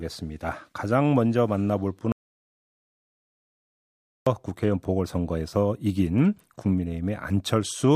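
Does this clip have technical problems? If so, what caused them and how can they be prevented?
Yes: an audio dropout to silence cuts the speech from 2.12 to 4.27 s, leaving dead silence with no room tone; likely a lost input connection while recording continued. Securing cables and monitoring input levels during capture prevents it.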